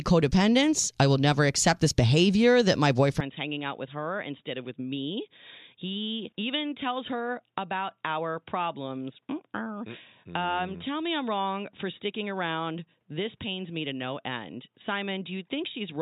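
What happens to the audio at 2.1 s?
Nothing goes wrong at 2.1 s; the audio is intact at that moment, with no dropout, click, distortion or other fault.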